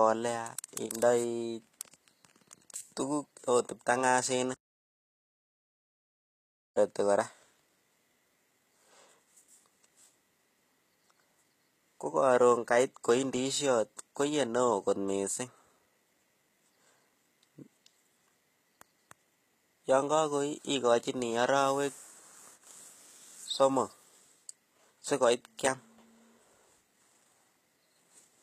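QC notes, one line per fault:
Throughout, HE-AAC compression: likely a low-bitrate HE-AAC encode near 20 kbps, its treble rebuilt from copied lower bands, so s sounds in the speech turn gritty and metallic.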